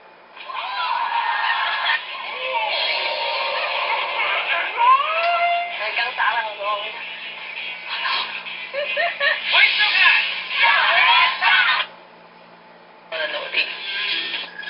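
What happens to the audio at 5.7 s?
Nothing goes wrong at 5.7 s: the sound carries straight through that moment with no dropout, click, glitch or other fault.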